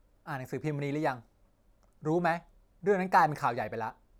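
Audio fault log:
No faults are heard in this speech recording. Nothing in it calls for an entry in the log.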